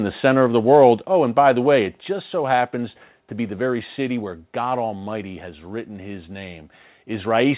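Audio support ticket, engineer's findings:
Microphone overload, 0.74 to 0.87 s, right after "the center of the": harsh crackle on the loudest peak. Likely mic input gain set too high, so peaks exceed converter full scale by about 1 dB and get flat-topped, with roughly 1.5 percent of samples clipped.

Microphone volume stepped down, 1.02 s and 2.04 s: abrupt level drops of about 4 dB and about 3 dB. The second falls between "by the way it" and "so happens to be". Likely the call software's gain control cut the device input in single steps after the overload, so voice and background drop together. The band limit at 4 kHz, consistent with a 64 kbps G.711 mu-law call path, is present throughout.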